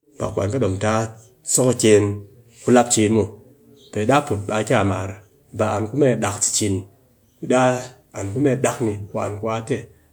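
No technical faults can be heard at any point in the speech.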